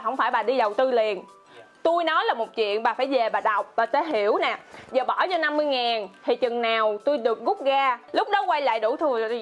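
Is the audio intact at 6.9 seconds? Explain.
Yes, the audio is intact at 6.9 seconds, with nothing there that would indicate a dropout, glitch or other fault.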